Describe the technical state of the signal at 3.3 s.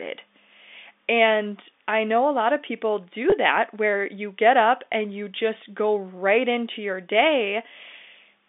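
Right at 3.30 to 3.32 s there's a packet loss with pitch repetition. About 20 ms of audio went missing, which fits a single dropped packet, and the receiver filled the hole by replaying the last pitch period it had. The gap is that short, so the fill never fades toward silence. You just get a brief held, slightly buzzy smear in the voice before the real signal picks up again, still band-limited by the G.711 telephone line.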